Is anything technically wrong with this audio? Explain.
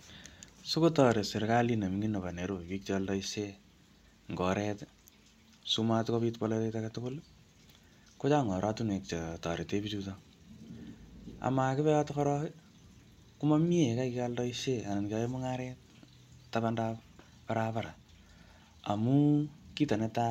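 No, nothing is technically wrong with this speech recording. No fault can be heard at any point in it.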